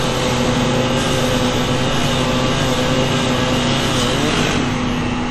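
Across the whole clip the audio has a ringing, washy quality, with a hiss that swells and fades along with the signal, and nothing above 13.9 kHz. This is likely WMA compression: its long transform blocks smear quantisation noise in time, at a rate that fits roughly 48 kbps.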